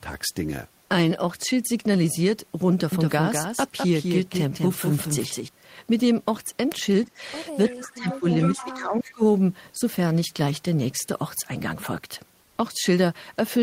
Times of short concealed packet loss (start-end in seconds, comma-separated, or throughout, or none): none